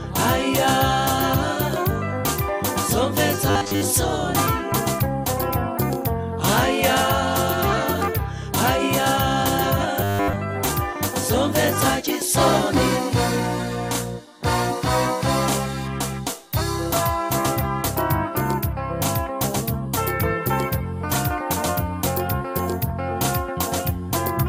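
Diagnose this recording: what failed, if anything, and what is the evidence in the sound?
Robotic sound from repeated short buffers at 3.50–3.81 s and 10.01–10.37 s: a stiff 100 Hz buzz, likely a starved buffer looping 10 ms chunks over most audio.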